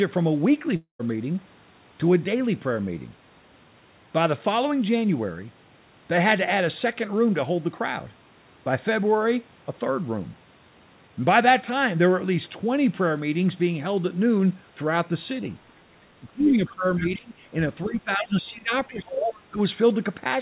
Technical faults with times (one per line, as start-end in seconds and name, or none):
0.76-1.01 long network dropout
16.20-17.39 speech suppressed in double talk
16.67-16.71 other side's voice leaking through
17.85-19.59 speech suppressed in double talk
18.89-18.98 other side's voice leaking through